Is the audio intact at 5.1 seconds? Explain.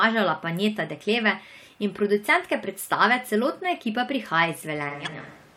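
No. From 4.91 s to the end, the recording most likely switched to a distant microphone, so the speech turns roomy and hollow, about 5 dB quieter, with thinner bass and room noise about 25 dB below it. Just before 5.1 s, from 5.03 to 5.09 s, damaged data in the compressed stream made the decoder lose sync and search for the next frame header, leaving a brief glitch.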